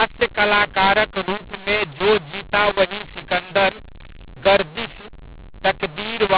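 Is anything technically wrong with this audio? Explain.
Yes. Throughout the whole clip there is a mu-law and A-law mix-up: the speech was stored as G.711 A-law but is being decoded with the mu-law curve. The two companding laws map the 8-bit codes to different amplitudes, so every sample lands on the wrong level, some too loud, others too soft, and near-zero codes jump well above silence. The speech sounds harsh and gritty, and the gaps between phrases fill with hiss. The band stopping at 4 kHz fits ordinary 8 kHz telephone coding.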